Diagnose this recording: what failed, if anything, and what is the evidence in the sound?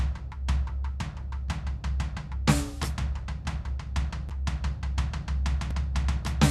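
The music drops to digital silence in two short blocks of digital silence, at 4.29 s for about 7.3 ms and at 5.71 s for about 2.7 ms. The second fits a 128-sample block at 48 kHz. This points to the driver or buffer stage: the output buffer was not filled in time, so zeros went out. The level falls to silence and returns with no fade, and gaps this short are heard as a tick or dip rather than as silence. A network dropout would usually be masked by concealment, and a cable fault would crackle rather than cut cleanly.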